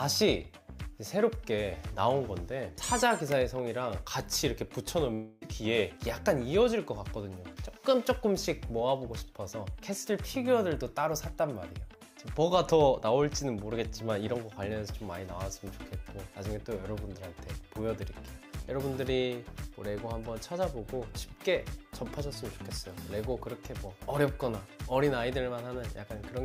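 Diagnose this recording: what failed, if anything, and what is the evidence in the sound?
Long network dropout, 5.13 to 5.42 s: a fading buzz or hiss fills 0.28 s, then the audio resumes with that stretch missing, likely from network packet loss.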